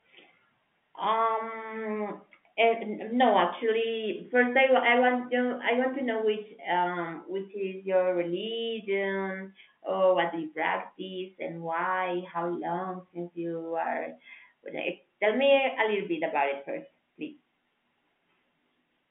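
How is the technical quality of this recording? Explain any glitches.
Nothing stood out on listening to this telephone-band speech, which sits in the narrow range of an ordinary G.711 line.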